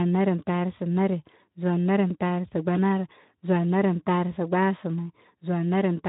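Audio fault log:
No faults to log for this audio.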